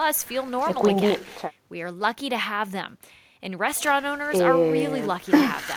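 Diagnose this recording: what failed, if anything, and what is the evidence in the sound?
A bit error spike at 4.80 s: a single sample in the digital path or storage had one bit flipped, jumping by a power of two and snapping back, heard as one sharp broadband tick.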